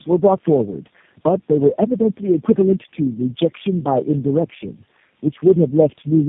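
Tandem speech coding affects the whole clip. The speech passed through four low-rate speech coders in a row, each decoding and re-encoding the already damaged output of the previous one. The sound fits a chain running AMR, then GSM full rate, then G.729A twice, with plain telephone links between. Errors pile up at each step. The voice sounds rough, muffled and warbly. Nothing is heard above 3.7 kHz.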